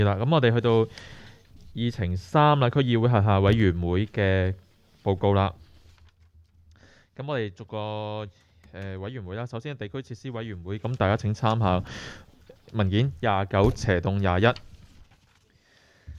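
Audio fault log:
No faults turn up anywhere in the clip. The smooth level changes behave as intended, with the level easing up or down gradually, like a fader move.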